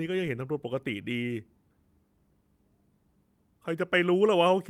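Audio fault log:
No faults were heard in this speech recording. Nothing in it calls for a timed entry.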